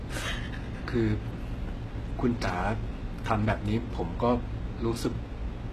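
From start to end the speech carries plainly audible coding damage, most likely HE-AAC compression at a low bitrate, around 16 kbps. The top stays bright, then stops dead above 12.3 kHz, but that brightness is rebuilt from copied lower bands rather than coded, so s sounds come out gritty and metallic, with a lispy edge. A plain low-bitrate codec would instead sound dull and muffled, with the treble missing rather than synthetic.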